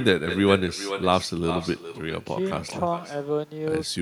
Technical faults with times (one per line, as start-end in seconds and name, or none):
0.00-4.01 echo with no canceller
2.68-2.72 chunks out of order